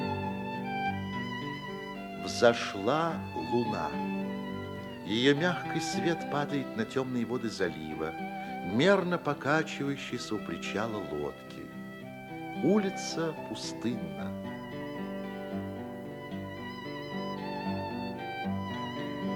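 No dropouts, clipping, glitches or other technical faults turn up anywhere in the clip.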